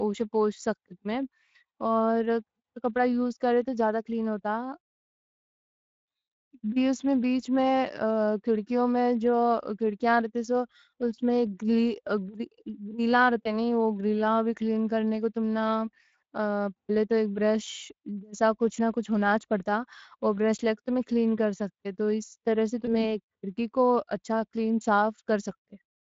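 Speech throughout, and the Speex codec damage is plainly audible: the voice has that hoarse, noisy CELP texture that comes from a thin excitation budget, which fits a Speex stream at around 20 kbps. There are two VoIP packet loss concealment hiccups, at 13.44–13.55 s and 22.85–22.95 s. Each sounds like a single lost 20 ms frame: the decoder stretches the last pitch and filter into a brief fading tone or noise, and the voice stays a bit weak and smeared for a moment before it recovers.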